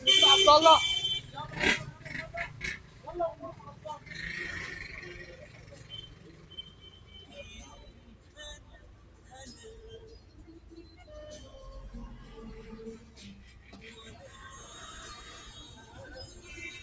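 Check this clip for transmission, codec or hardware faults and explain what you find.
The clip has a speech-tuned noise suppressor left on across everyday sounds. Throughout, this noise suppressor applied to sounds treats steady, ambient and decaying content as noise. Gain swings by around 10 dB, so the sound pumps and thins. Call processing limits content to 8 kHz.

Sound cut by the noise suppressor occurs at 2.5–3.06 s, 3.58–4.07 s, 5.41–7.32 s, 7.9–9.32 s, 10.19–11.03 s and 13.01–13.73 s. Each drops by up to about 6 dB. Sustained parts and tails sink while sharp onsets pass.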